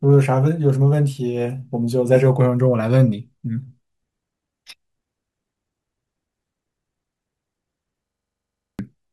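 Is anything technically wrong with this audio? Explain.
Yes. From 8.06 to 8.79 s, a system hang loop interrupts the speech. The system stalled while the hardware kept replaying its buffer. A 42.7 ms slice, which fits a 2048-sample buffer, repeats 17 times at 23.4 Hz. This makes a rough, buzzing stutter, and about 0.7 s of real audio is lost.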